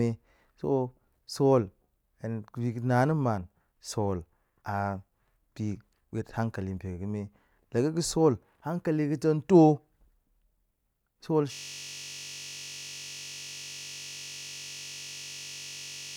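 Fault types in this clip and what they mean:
System hang loop: the computer or its audio driver froze while the sound hardware kept replaying its ring buffer, so from 11.53 s to the end a single 21.33 ms slice repeats over two hundred times, which fits a 1024-sample buffer and sounds like a steady 46.9 Hz buzz.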